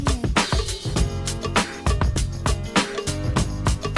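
No faults are audible anywhere in this audio, so there is nothing to time or attribute to a cause.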